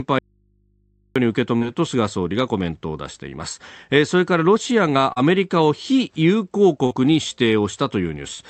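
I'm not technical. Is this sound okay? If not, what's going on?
No, there are two problems. Near the start, from 0.19 to 1.16 s, there's an audio dropout to a faint residue. The speech cuts out abruptly for almost a second, leaving only a quiet hum. That's likely a connection that stayed open while the actual signal went missing.

There are also three short concealed packet losses, at 1.57, 5.13 and 6.86 s. Each time, a tiny slice of about 40 ms didn't arrive, and the call software patched it by stretching the previous sound. You'll hear a brief smear or wobble.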